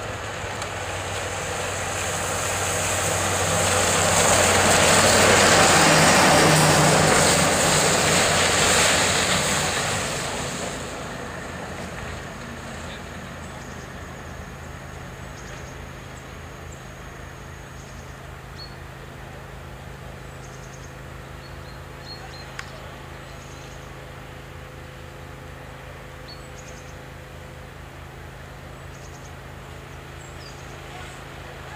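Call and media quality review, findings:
No audible faults found.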